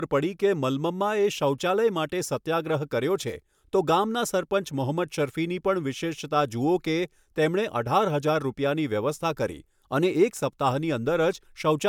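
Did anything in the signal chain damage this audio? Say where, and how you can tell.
Yes, at the codec stage, throughout the speech: a swirl, hollowness and softened consonant attacks with the band still reaching 20 kHz. That full top end at roughly 140 kbit/s MP3 rules out a single low-bitrate pass, pointing likely to generation loss from about three encodes, each adding fresh quantisation noise.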